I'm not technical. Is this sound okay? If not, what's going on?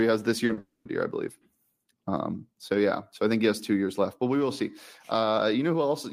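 No. Two kinds of fault cluster in the first second.

Right after "he has this", there are two instances of short concealed packet loss, at 0.45 to 0.51 s and again at 0.53 to 0.59 s. Each time, about 40 ms of the call arrived too late to play. The receiving end patched each gap by extending the sound just before it, which comes across as a quick smear or wobble, and a short sound in that spot can disappear.

Straight after that, from 0.59 to 0.87 s, the audio turns into a stretched, fading continuation of the last sound, ends in about 60 ms of silence, and resumes at "year I believe". This is likely a long network dropout. Over a quarter of a second never arrived, and the receiver could only fill it with an artificial tail, so that portion is lost.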